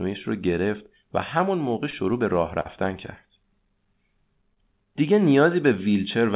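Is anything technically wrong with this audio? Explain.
Yes, there are packet-loss problems, heard over a narrowband call path with nothing above 4 kHz, which fits G.711 mu-law telephony.

Short concealed packet loss at 1.90 to 1.95 s and 4.54 to 4.58 s: each time about 20 ms of audio arrived too late, so the receiver stretched the last sound for roughly 18 to 25 ms and blended back, giving a quick smear or wobble.

Burst of packet loss from 2.61 to 2.82 s: about 40 ms went missing in a row. The receiver carried the previous sound for about 46 ms while fading it down into a held buzz or hiss, then jumped ahead, dropping around 8 ms of the audio.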